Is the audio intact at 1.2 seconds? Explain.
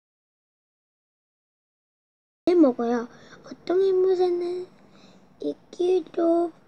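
No. At 1.2 s there is an audio dropout to silence, running from the start to 2.47 s. The input was likely lost, so only silence remains, with no room tone.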